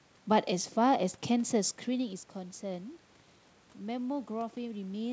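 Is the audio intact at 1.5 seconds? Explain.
Yes, the speech is intact at 1.5 seconds, and the change in level around that moment is just the talker moving relative to the microphone, not a fault.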